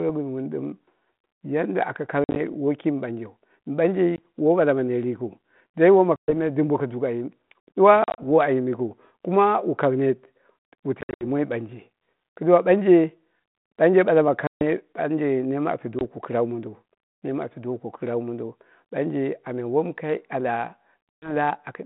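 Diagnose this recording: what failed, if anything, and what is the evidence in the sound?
The network stage failed: packet loss on an ADPCM call, in a narrowband line (150 Hz to 3.6 kHz) consistent with 32 kbit/s G.726. Speech cuts to hard-edged silence at 2.24, 4.16 (just before "woi bala ma net"), 6.16, 8.04, 11.01, 14.47, 15.99, and 21.09 s. The gaps run from 20 ms to about 160 ms, and some are split into short bursts. On the waveform these show as flat gaps with abrupt edges, and on the spectrogram as blank vertical bands. Each return comes back slightly distorted because the decoder's predictor and step size must re-adapt.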